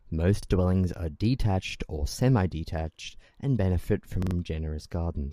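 Four times in this speech recording, fresh audio failed to reach the playback device in time, so it replayed its last buffer, a repeated buffer fault. Each repeated piece is about 43 ms long, which fits a 2048-sample buffer. It is heard as a brief stutter with a hard join at 0.43–0.47 s, 1.71–1.75 s and 2.94–2.99 s. At 4.22–4.35 s the same piece sounds four times in a row. Apparently no audio is lost, so the stutters only add time.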